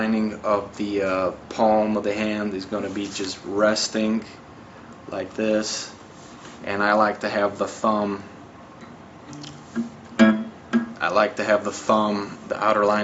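Nothing stood out on listening, and the top end stopping around 8 kHz is just what the call's microphone processing and Opus link normally do.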